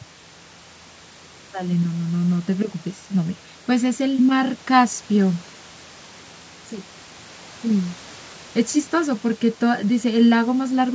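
No faults: the speech has passed through call microphone processing, which removes the lowest bass and leaves nothing above 8 kHz, as expected for that path.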